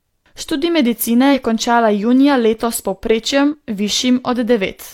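At 1.30 to 1.34 s the speech jumps forward. Compressed frames were skipped here. Roughly one frame of audio never played, about 50 ms lost. That jump fits a frame of 46.4 ms. The decoder either lacked the frame or rejected it as damaged. The same skip returns at 3.49 to 3.55 s, again dropping roughly 50 ms.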